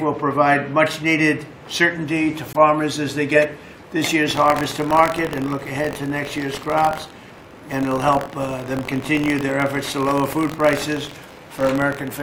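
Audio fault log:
2.53 s, gap at a join of encoded pieces: A silence of about 19 ms cuts into continuous sound. Two separately encoded pieces meet here untrimmed. Encoder start delay and end padding remain. The codec smears the edges, and the sound resumes where it stopped.
4.27 to 12.23 s, buffer tearing: A robotic buzz near 46.9 Hz runs to the end, which fits a 1024-sample buffer. Writer and reader have slipped. A small slice of each buffer replays audio from roughly a tenth of a second earlier, with hard joins.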